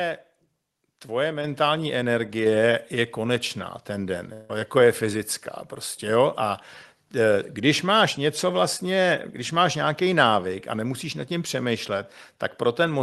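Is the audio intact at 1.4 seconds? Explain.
No. At 1.44 s there is a microphone volume step-up. The call software judged the microphone too quiet and raised the device's input volume in a single jump, by about 5 dB. The change is instant rather than a fade. The speech and the background noise both get louder at the same moment. The rest of the sound carries on at the new, higher level. The Opus call coding, with its top end near 12 kHz, is unaffected by the jump.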